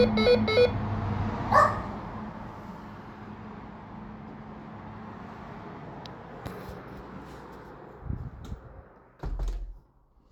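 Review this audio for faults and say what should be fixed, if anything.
Nothing needs fixing; no faults can be heard.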